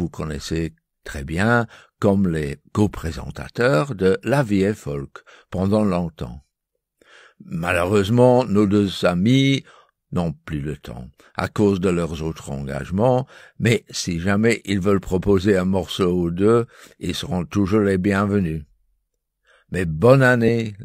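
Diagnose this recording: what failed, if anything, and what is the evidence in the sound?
The codec stage failed near the end of this speech recording: damaged data in the compressed stream produces a brief glitch at about 20.44 s. Corrupted bytes leave the decoder unable to read those frames, so it loses sync and resumes at the next valid frame header.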